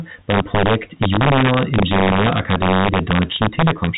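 Integer overflow runs through the whole speech clip: the level sits about 1 dB too hot, so a small share of the loudest peaks exceed the integer limit and wrap to the opposite sign instead of being held. Each wrap is a harsh crack on loud syllables, sharper than clipping, over a telephone-band G.711 path with nothing above 3.8 kHz.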